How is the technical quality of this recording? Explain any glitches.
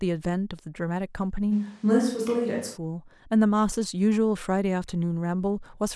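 The recording has one glitch, a switch to a distant microphone from 1.54 to 2.75 s. The speech suddenly turns roomy and hollow, with thinner bass and room noise around 35 dB below the speech, at roughly unchanged loudness, then snaps back. Likely the close microphone's signal dropped out, leaving a farther pickup that captures more room reflection and less low end.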